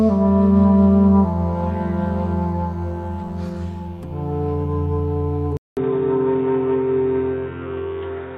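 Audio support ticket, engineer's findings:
Input switched to a poorer device at 5.57 s, persisting to the end. 200 ms dropout at the switch, then dull, boxy tone with nothing above 3.8 kHz, level shift of roughly 5 dB, and a new background noise about 35 dB under the signal. Likely cause: capture moved to another mic or a headset call profile. This is not a filter or codec change, because the gap, level jump and different noise floor arrive together at one instant.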